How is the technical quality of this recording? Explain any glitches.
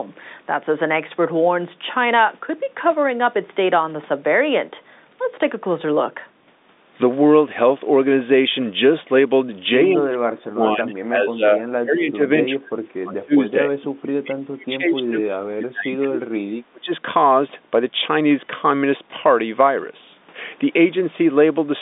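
The recording has clear trouble in its middle stretch, where the speech keeps getting pushed down. It's a phone-band recording, with nothing above about 3.8 kHz, which fits G.711 A-law coding on a normal line.

The fault is speech suppressed in double talk, from 9.96 to 12.19 s, 12.45 to 13.79 s, 14.03 to 16.39 s and 16.72 to 16.9 s. The voice sinks by roughly 30 to 35 dB and breaks into pieces. This is likely an echo canceller mistaking the talker for loudspeaker echo while both sides spoke, and muting it.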